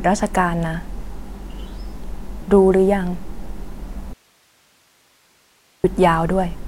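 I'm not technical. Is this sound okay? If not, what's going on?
No. From 4.13 to 5.84 seconds the speech cuts out abruptly for about 1.7 seconds, leaving only faint hiss: an audio dropout to a faint residue. A natural pause or fade wouldn't switch off this suddenly; the likely cause is the signal briefly losing its connection.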